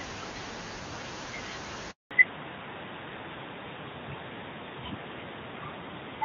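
A speech recording, heard over a mobile call. At 1.91 s there is a handover gap. The call switches networks and no frames arrive for 200 ms, until 2.11 s. The speech dies away and silence follows. Nothing said in that stretch survives. From 2.11 s to the end there is a fallback to narrowband. Before the switch, the HD Voice link is clean, consistent with AMR-WB at 23.85 kbit/s. Afterwards nothing sits above 4 kHz, which fits AMR-NB at 12.2 kbit/s. The speech turns duller and rougher.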